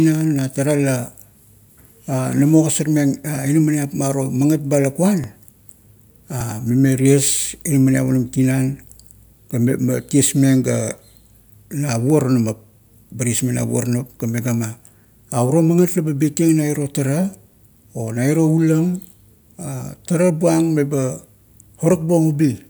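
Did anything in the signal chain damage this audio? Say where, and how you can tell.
Yes, jumps at 5.24 s and 6.41 s, each skipping a few milliseconds of speech, likely a dropped buffer (overrun) at the driver, the two sides joined directly with no silence.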